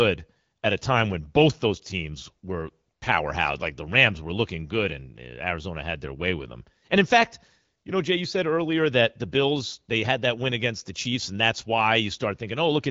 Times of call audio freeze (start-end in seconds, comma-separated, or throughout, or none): none